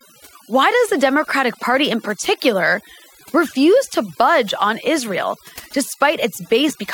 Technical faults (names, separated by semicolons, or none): overdone noise removal